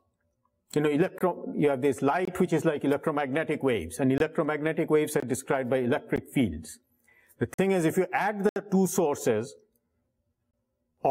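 At 1.18, 2.25, 4.18, 5.20, 6.16, 7.54, 8.49 and 10.51 s the sound drops into a block of digital silence. Most gaps last 23 ms, the one at 6.16 s about 16 ms, 7.54 s 46 ms and 8.49 s 70 ms. The sound cuts out and back with hard edges, unlike a fade. Doubled and tripled lengths fit an unfilled 1024-sample output buffer.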